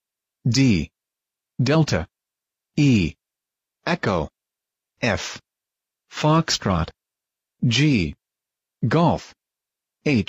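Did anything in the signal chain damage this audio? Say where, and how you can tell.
No, nothing along the signal chain leaves an audible mark on this signal.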